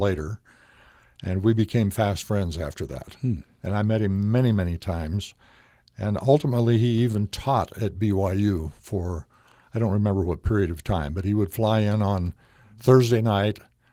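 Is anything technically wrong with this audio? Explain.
No, nothing is technically wrong with this speech audio.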